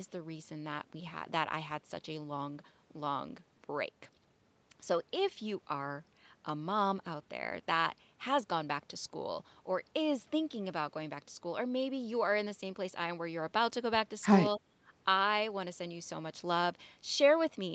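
From 14.57 to 14.79 s the speech level sinks by roughly 15 dB for about a fifth of a second, then returns. This is speech suppressed in double talk, likely an echo canceller mistaking the near talker for loudspeaker echo and attenuating it.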